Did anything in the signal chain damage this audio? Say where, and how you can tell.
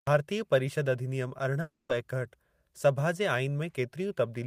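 Yes, there's a long network dropout from 1.61 to 1.91 s. The speech gives way to a fading buzz or hiss continuing the last sound, then near-silence, and picks up again with roughly 280 ms missing. That's likely packet loss the receiver tried to conceal.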